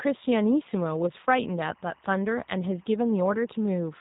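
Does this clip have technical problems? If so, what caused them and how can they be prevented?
Yes. G.729 codec damage runs throughout the speech. The audio sounds rough and synthetic, the kind of roughness that fits an 8 kbit/s G.729A stream. That codec rebuilds each 10 ms frame from a vocal tract filter, a pitch predictor and a handful of pulses rather than sending the waveform itself. Nothing above about 3.8 kHz survives, so sibilants are dulled and lose their crisp top end. To prevent it, record or transmit with a wideband, higher-bitrate codec such as Opus instead of narrowband G.729.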